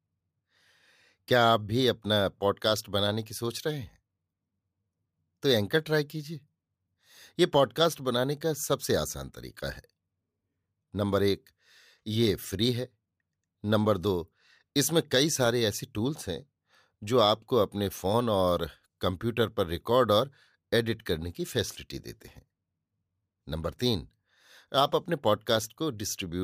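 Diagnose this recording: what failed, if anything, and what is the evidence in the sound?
Listening through the speech recording, nothing stood out that would point to a failure at any stage of the chain.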